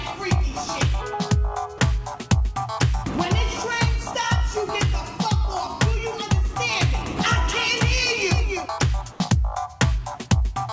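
Comfort noise in place of the background, from 9.12 to 9.20 s: for about 80 ms the real background, sitting about 25 dB below the loud parts, gives way to a steady, featureless hiss about 1 dB quieter. The likely cause is discontinuous transmission, where the sender stopped sending during a pause and the receiver filled the gap with synthetic noise shaped to the background. The fill sits within a band that stops at 8 kHz, which fits a G.722 call codec.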